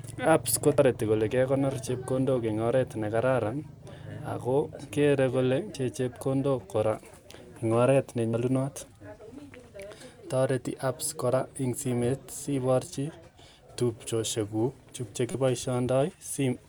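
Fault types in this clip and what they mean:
Damaged data in a compressed stream: corrupted bytes in the encoded speech made the decoder lose frame sync and hunt for the next header, so brief glitches break through at 0.78, 5.74 and 8.34 s, and a longer blip at 15.31 to 15.35 s.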